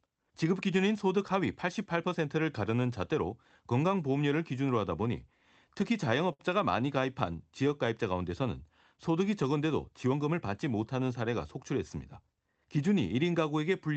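From 5.73 to 6.41 s, packets arrived late and the jitter buffer ran dry five times, producing repeated stalls (stutter). The receiver stretched the last sound to bridge each gap, about 99 ms in all, with the longest gap 64 ms. Nothing is lost, but the speech hitches and drags.

From 7.00 to 7.69 s, the jitter buffer slow-down sets in as the receiver rebuilds its reserve by repeating single pitch periods, adding 53 ms. The speech plays at 94% speed at unchanged pitch, so sounds in this stretch are slightly drawn out, over a call path whose band ends near 8 kHz.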